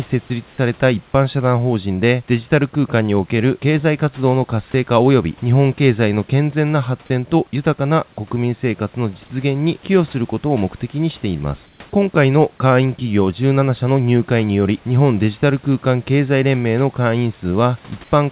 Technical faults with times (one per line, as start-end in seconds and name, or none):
0.28 sound dropped by the voice detector
4.72-4.74 sound dropped by the voice detector
11.66-11.80 comfort noise in place of the background
18.04-18.12 comfort noise in place of the background